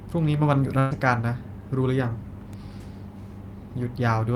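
A burst of packet loss runs from 0.79 to 0.93 s. A short run of speech packets never arrived in time, and the receiver covered the hole for about 112 ms by extending the last sound it had and letting it fade, heard as a held, dwindling buzz or hiss. When the stream picks up again it has moved on, so roughly 120 ms of the original speech is simply absent and the sentence jumps forward.

An electrical switching spike lands at 2.53 s as a sharp snap laid over the speech. It sounds like a brief arc from a nearby switch, motor or static discharge that the audio line likely picked up, an impulse riding on top of the signal rather than a break in it. The speech beneath carries straight through, with only the crisp click standing out.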